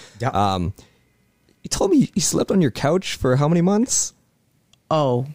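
No technical fault can be heard anywhere in this speech recording. The signal continues without any audible break or disturbance.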